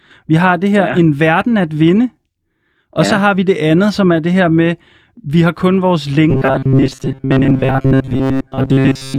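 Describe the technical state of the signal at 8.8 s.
At 8.8 s the signal is inside robotic sound from repeated short buffers, spanning 6.30 s, after "vi har kun vores", to 9.18 s. Audio likely arrived too seldom, so a fragment of about 7.5 ms stood in for most real audio, forcing a rigid 134 Hz metallic buzz.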